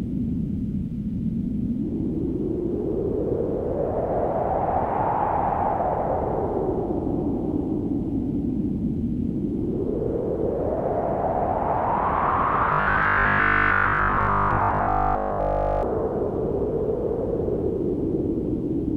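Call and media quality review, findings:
Robotic sound from repeated short buffers, 12.73 to 15.83 s. Rigid, metallic 50 Hz buzz over the audio. Likely cause: starved playout buffer re-looping the last ~20 ms chunk, with most of the real audio skipped and replaced by repeats.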